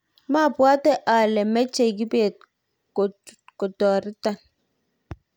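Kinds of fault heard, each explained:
Nothing to flag in this bit of speech, since no technical faults turn up anywhere in it.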